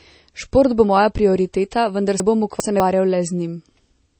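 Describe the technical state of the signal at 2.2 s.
At 2.2 s, just after "bo moja prioriteta vendar", the chunks are out of order until 2.8 s. A 200 ms piece of audio plays two chunks late, so the passage sounds jumbled, with three hard joins. The waveform shows abrupt steps at those joins, and the spectrogram shows vertical broadband lines.

Over the same moment the treble stops sharply at 8.4 kHz. The sound is watery and swirly, with smeared attacks, most likely from MP3 compression at a low bitrate, around 32 kbps. On a spectrogram this appears as a flat ceiling at 8.4 kHz with flickering gaps below it.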